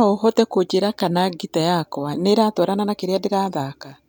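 No technical faults can be heard anywhere in this speech.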